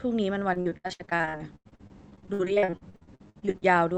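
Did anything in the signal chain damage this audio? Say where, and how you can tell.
Yes. From 0.53 to 3.63 s the speech turns choppy and robotic, with dozens of brief dropouts up to 95 ms long. This is repeated packet loss on the network: the jitter buffer patches each missing packet by extending the previous sound, and roughly 40% of that stretch is filled in this way.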